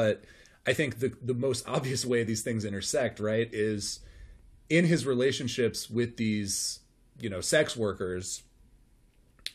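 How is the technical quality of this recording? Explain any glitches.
No technical glitches are audible.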